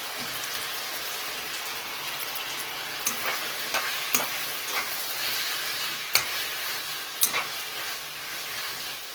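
Throughout the clip, the audio was likely squeezed through Opus compression in its music (CELT) mode at a very low bitrate, on the order of 16 kbps. With too few bits to describe each band precisely, the encoder keeps each band's overall energy but fills in its detail with folded copies of lower bands or with noise. The damage is plainly audible: tonal parts turn rough, grainy and noisy rather than swirling, while the full bandwidth stays open up to about 20.4 kHz.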